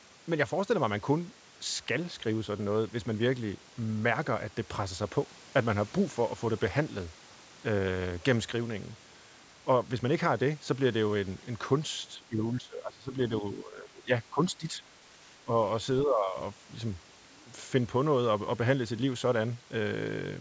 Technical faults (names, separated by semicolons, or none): speech suppressed in double talk